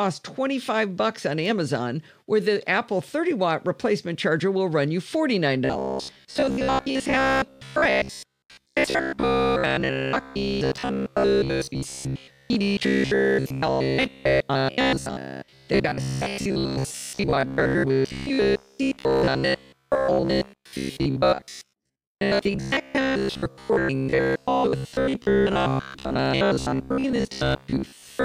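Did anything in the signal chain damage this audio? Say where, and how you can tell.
Yes. From 5.65 s to the end, there is robotic sound from repeated short buffers: a rigid 66.7 Hz buzz, likely a buffer stage replaying 15 ms blocks instead of leaving silent gaps.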